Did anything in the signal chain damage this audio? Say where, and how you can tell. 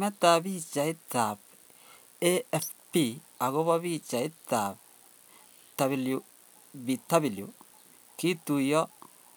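No, nothing along the chain from capture to playback has left an audible mark on this speech. There is no point in the recording where a stage can be heard to have altered the signal.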